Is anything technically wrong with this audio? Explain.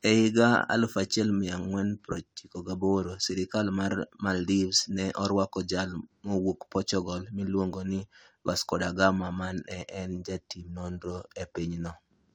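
No, nothing technically wrong can be heard in this speech clip. No technical fault turns up anywhere in the recording.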